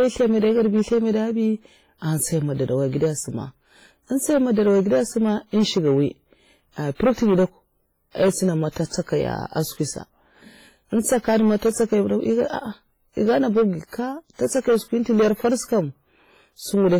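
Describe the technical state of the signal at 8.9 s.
At 8.9 s the signal carries hard clipping: it is driven about 10 dB past what a stage could pass, so a few percent of samples have flattened peaks that add upper harmonics, heard as distortion on loud moments. There is also heavy transform-codec damage, a ringing, washy texture with hiss that rises and falls with the signal. This is likely WMA compression at a low bitrate, consistent with about 24 kbps. From 8.86 to 8.91 s, pre-echo spreads about 51 ms of quantisation hiss ahead of an attack, because noise sized for the loud part fills the quiet moment before it within the same block. The onset sounds smeared.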